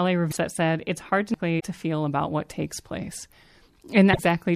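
A broken MP3 bit reservoir is the likely cause of the glitches at 0.30 to 0.37 s, 1.59 to 1.64 s and 4.12 to 4.19 s. After missing frames, each 26.1 ms long, the next frames reach back for borrowed data, find the wrong bytes, and the speech jumps ahead through a brief chirp, noise burst or gap. A CD skip at 1.34 s comes between the first two: the laser jumps tracks, the player mutes for only a couple of milliseconds, and the speech resumes from another point on the spiral with a tick or short gap.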